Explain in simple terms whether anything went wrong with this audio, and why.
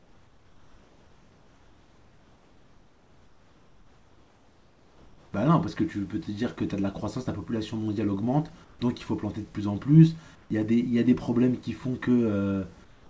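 Comfort noise in place of the background appears from 0.0 to 5.33 s, then briefly at 8.64, 10.35 and 12.84 s. In these pauses the sender likely stopped transmitting, and the receiver filled the gaps with a flat, slightly quieter artificial hiss instead of the real room noise.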